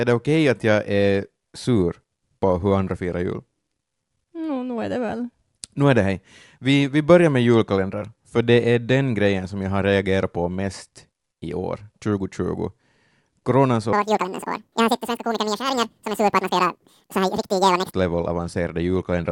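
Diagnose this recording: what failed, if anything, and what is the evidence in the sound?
From 13.93 s to 17.93 s the speech suddenly runs at double speed and jumps a full octave (12 semitones) higher, giving a chipmunk-like, hurried quality before returning to normal. This is a wrong sample rate fault at the playback or converter stage: the samples are clocked out twice as fast as they were captured, with no resampling. Speed and pitch rise together by the same 2.0 ratio, which fits 24 kHz material being played at 48 kHz.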